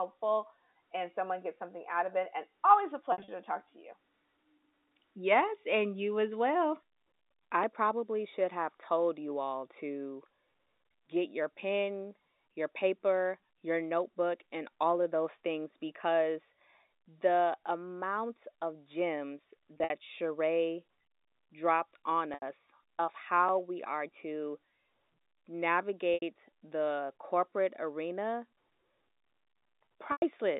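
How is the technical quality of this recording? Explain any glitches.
The recording has two kinds of transmission glitch: five brief dropouts that were covered up by pitch repetition, and one tiny repeated-buffer click. Beneath them, the narrow band of the G.711 telephone line can be heard at roughly 250 Hz to 3.7 kHz.

Packet loss with pitch repetition occurs at 3.12–3.28 s (between "always a" and "to talk to you"), 19.74–19.90 s (after "the amount of gems"), 22.34–22.42 s, 26.14–26.22 s and 30.12–30.22 s. Each gap lasts 80 to 120 ms. In the first two the losses are scattered over 160 ms, with runs of up to 60 ms. The receiver fills each hole by looping the last pitch cycle, so the sound briefly holds a buzzy, sustained tone that fades before the voice cross-fades back in. That smooth, tonal hold is what separates it from a buffer fault.

The repeated buffer comes at 23.49 s, just before "we are to". 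Fresh audio arrived late, so the device replayed its last block twice more. The sound fits a block of about 64 samples, so only a few milliseconds go missing. Because each replay meets the next with a hard join, the result is a click or brief buzz, with no held pitch and no fade.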